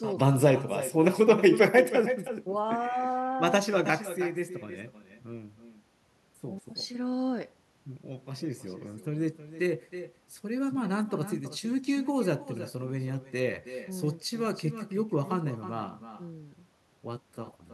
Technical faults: echo with no canceller

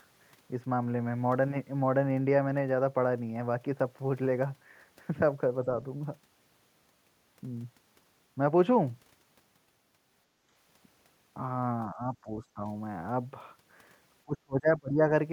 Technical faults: background gated by the echo canceller; speech suppressed in double talk

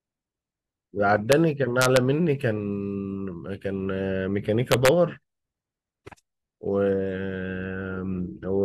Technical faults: integer overflow

